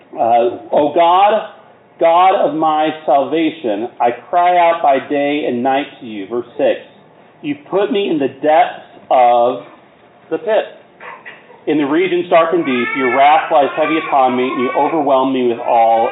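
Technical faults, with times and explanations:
No technical faults are audible in this recording.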